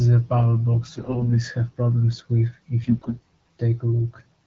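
Speech that twice turns hoarse, scratchy and gargly while keeping roughly its pitch and level, from 0.95 to 1.34 s and again, more harshly, from 2.82 to 3.15 s. These are AMR bit errors: on a weak link, flipped low-priority bits misplace the excitation pulses and skew fine pitch, gain and spectral values. The wideband AMR-WB coding around them sounds only lightly coloured, which fits the 12.65 kbit/s mode.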